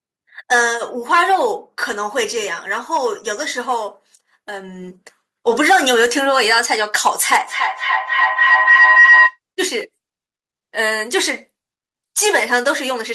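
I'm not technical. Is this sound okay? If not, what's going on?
No. From about 7.47 to 9.39 seconds there is a feedback howl. Two devices in the same room were likely on the same call, so one device's loudspeaker fed back into the other's microphone, round and round, getting louder each trip. You hear it as a shrill whistle near 2 kHz that swells until it's louder than the speech, as the sound circles the loop roughly every third of a second.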